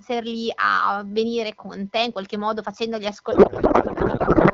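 A faint, steady 1 kHz USB whine runs through the whole clip, well below the speech, from the 1 ms bus frames leaking in through power or ground. At 3.32 s a codec payload misread kicks in and lasts to the end. Octet-aligned AMR is being read as bandwidth-efficient, so the speech turns into garbled, warbling noise.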